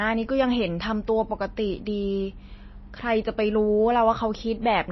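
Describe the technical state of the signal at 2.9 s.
At 2.9 s the speech carries the same damage heard across the whole clip: nothing above 5.8 kHz, with a watery, swirling texture. That points to likely MP3 compression at a low bitrate, around 24 kbps, where weak frequency lines are zeroed and flicker between frames.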